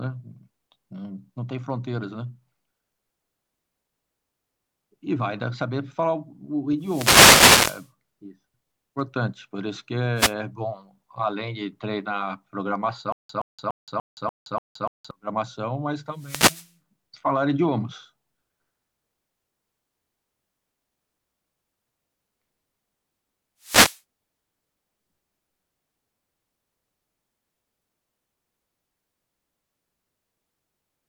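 Wireless microphone noise hits come at 6.79–7.90 s and 10.15–10.34 s: the FM radio link fades as reflections cancel, so receiver noise swells into a swish of static over the speech.

A stutter with silent gaps runs from 13.12 to 15.11 s. A 0.12 s fragment repeats seven times, each followed by about 0.17 s of digital silence, a 0.29 s cycle. This likely comes from a stalled player replaying its last fragment on each retry, and the speech in that span is lost.

Further wireless microphone noise hits, the same fading static bursts, follow at 16.13–16.75 s and 23.60–24.01 s.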